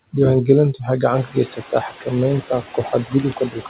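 Noise suppressor artifacts run through the whole speech clip. The suppressor pulls down each frequency band it judges to be steady noise by about 8 dB, deciding frame by frame. The background dips in the pauses and swells back under the speech. The room noise climbs by about 15 dB at roughly one second. Nothing reaches above 4 kHz.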